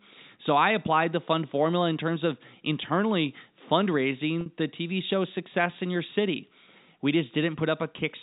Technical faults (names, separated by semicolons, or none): packet loss with pitch repetition